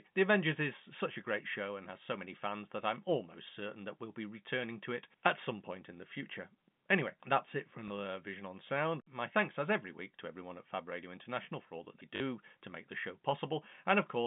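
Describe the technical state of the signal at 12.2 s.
At 12.2 s a packet loss with last packet repeated is just ending: from 12.16 to 12.2 s, 40 ms went missing, fitting two 20 ms packets, and the last good one was replayed. The repeats ignore the speech pitch, giving a brief robotic stutter.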